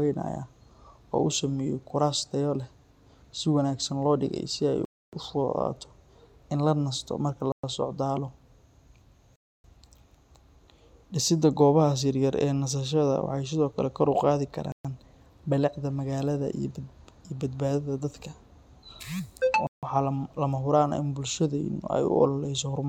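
The speech drops to dead silence five times: at 4.85 to 5.13 s for about 278 ms, 7.52 to 7.64 s for 115 ms, 9.36 to 9.64 s for 283 ms, 14.72 to 14.85 s for 126 ms, and 19.67 to 19.83 s for 157 ms. These are likely Bluetooth stalls, where interference delayed packets until the headphones' buffer emptied. The waveform flattens to near silence and the spectrogram shows clean vertical gaps across every frequency.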